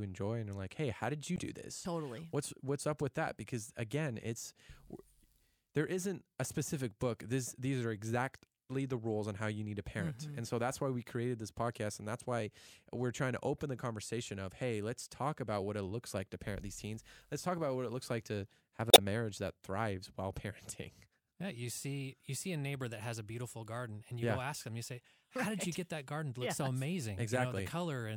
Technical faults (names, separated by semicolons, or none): damaged data in a compressed stream